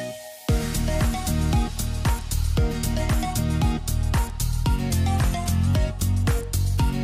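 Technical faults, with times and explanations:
4.90 to 5.66 s, drift correction step: the sound suddenly slows by 6.3% and drops 113 cents, just over a semitone flat, then snaps back to normal speed and pitch. Speed and pitch shift together because the playback rate itself changed, most likely in a clock-matching routine adjusting its buffer level in one step. On a spectrogram, every harmonic steps down by the same ratio for those 0.76 s and then jumps back. On the waveform, that span looks slightly stretched.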